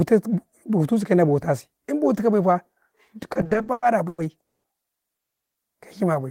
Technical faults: repeated stalls (stutter); call audio freeze

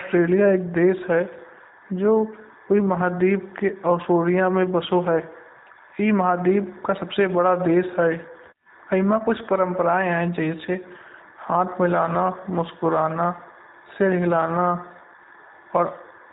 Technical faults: G.729 codec

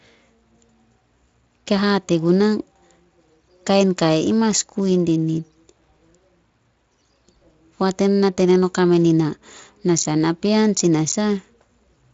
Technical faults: none

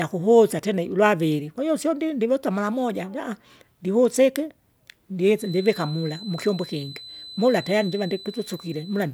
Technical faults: feedback whistle

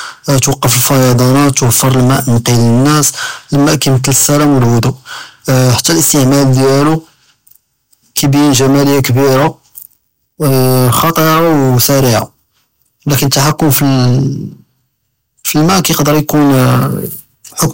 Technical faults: hard clipping

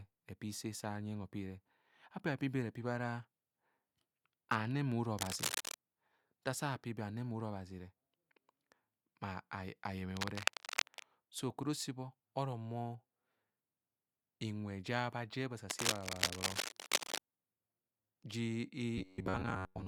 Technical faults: cable scratch noise; robotic sound from repeated short buffers

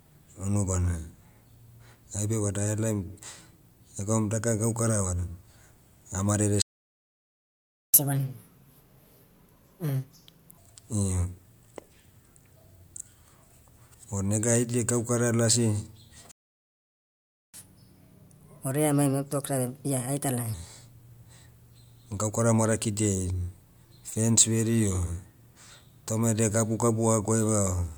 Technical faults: playback stall; catch-up at higher speed

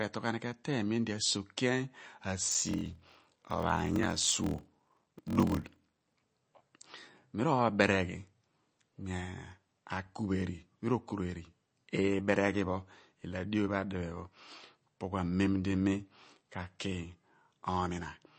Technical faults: MP3 compression; block size mismatch (padded)

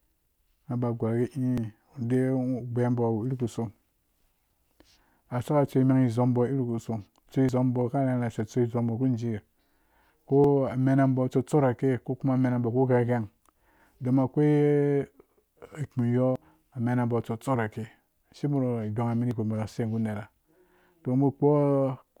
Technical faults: audio missing between chunks

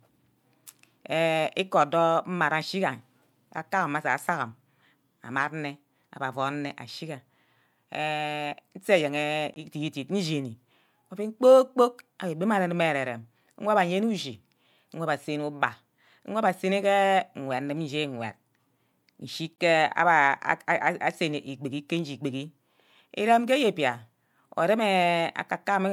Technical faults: gap between chunks

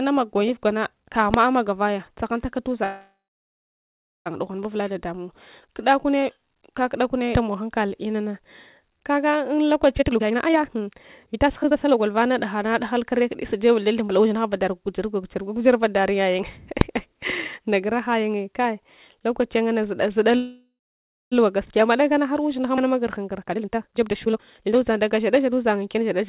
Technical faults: invalid numbers at full scale; call audio freeze; jitter buffer speed-up

